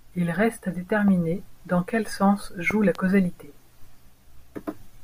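Right after "reste à", around 1.08 to 1.10 s, there's a loud pop a little above the speech, then a stronger double pop from 2.71 to 2.97 s after "dans quel sens", about 10 dB over. Both sound like a voltage spike, likely from a plug, switch or static, landing on top while the speech carries on underneath.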